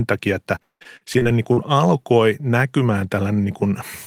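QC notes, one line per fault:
0.55–1.59 s, repeated packet loss (robotic sound): after "takia että", gaps up to 182 ms are patched by repeating earlier sound, making the speech choppy and robotic.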